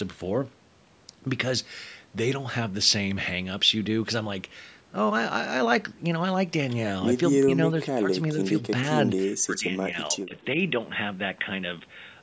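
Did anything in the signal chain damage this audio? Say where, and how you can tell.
Yes. The speech dips at 7.47 to 8.11 s, 8.34 to 8.58 s and 9.44 to 10.35 s, by up to about 15 dB. This is speech suppressed in double talk. The call-processing echo canceller likely mistook the talker for loudspeaker echo and cut the gain.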